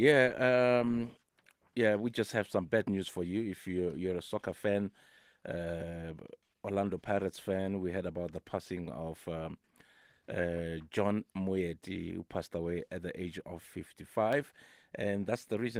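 From 14.33 to 14.76 s, near the end of the speech, come CD scratch ticks. Three short clicks sit at a steady spacing across that half second. Each lasts well under a millisecond. A blemish on the disc wiped out more data than error correction could rebuild, once per turn. The player patched over the damaged samples, leaving a small tick each revolution. The light, full-band Opus voice coding beneath is working normally.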